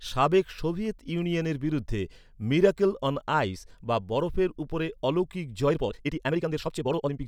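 From 5.65 s to the end of the clip, the speech suddenly runs at about 1.92 times its earlier pace while the pitch stays where it was. That is a time-stretched section, most likely software squeezing the passage to fit a shorter length by dropping short slices of audio. The result sounds rushed. Unlike a sped-up playback fault, the voice doesn't rise in pitch or turn chipmunk-like.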